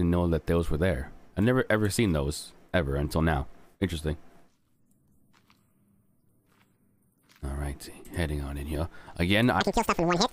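At 9.61 s the sound suddenly lurches into a chipmunk-like rush, running twice as fast and a full octave (12 semitones) higher until the clip ends at 10.32 s. This is audio read two samples at a time (double speed): the reader treats each pair of samples as a single frame, so the material is consumed at 2x.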